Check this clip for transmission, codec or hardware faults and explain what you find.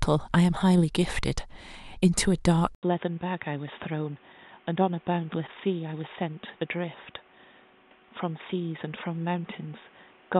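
One fault is present. At 2.75 s, after an 80 ms gap, the input likely switched to a poorer device. Nothing above 3.7 kHz remains. The speech turns boxy, slightly quieter, with new background noise.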